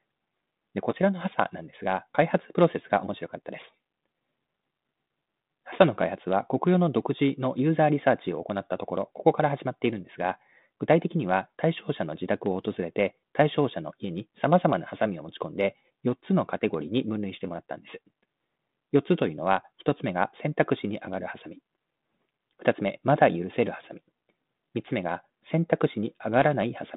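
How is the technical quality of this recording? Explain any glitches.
There are no glitches in the recording. It carries the narrow band of a G.726 ADPCM telephone path at 32 kbit/s, roughly 150 Hz to 3.7 kHz, with only the light graininess that coding leaves.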